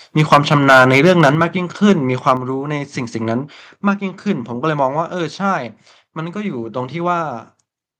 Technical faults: microphone overload; microphone volume stepped down

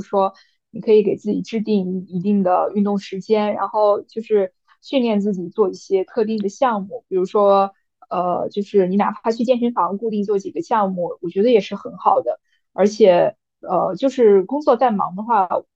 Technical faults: drift correction step

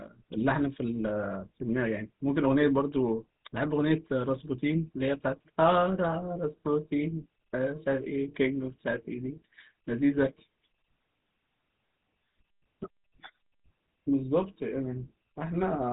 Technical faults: GSM full-rate codec

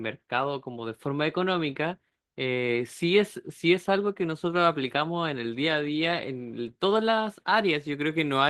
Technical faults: Opus voice compression

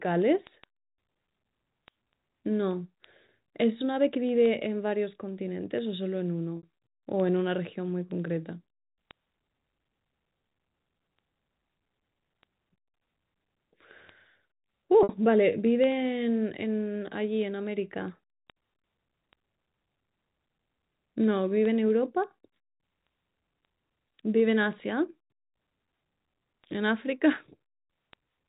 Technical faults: packet loss with pitch repetition

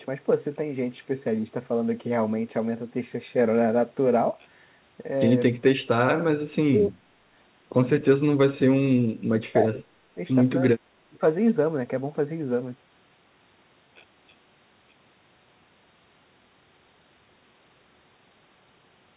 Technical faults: speech suppressed in double talk

